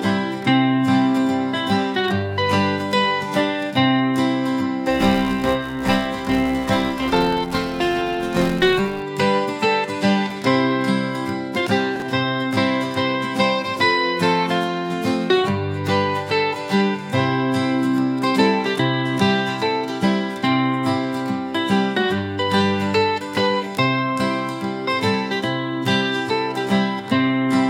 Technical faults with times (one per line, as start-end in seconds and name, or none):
4.90-9.03 filter restarted on every block
11.96-12.02 chunks out of order